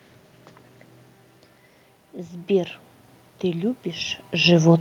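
From 3.41 to 4.6 s you can hear automatic gain rising. The level coming in dropped by about 12 dB, so the gain control crept up by about 4 dB over that second or so, and the speech and room noise swell together.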